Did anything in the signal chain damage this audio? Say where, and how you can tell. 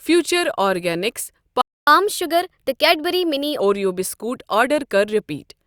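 Yes. A playback stall hits the speech from 1.61 to 1.87 s: the sound cuts out mid-flow for about 0.26 s, then resumes where it stopped. This points to the playback stage, most likely the player's buffer running dry or its output thread being blocked.

A catch-up at higher speed follows from 1.87 to 3.60 s, ending just before "اوریو بسکوٹ". The player resamples its backlog to run 1.15 times faster, so speech sounds hurried and about two semitones higher, then snaps back to normal pitch.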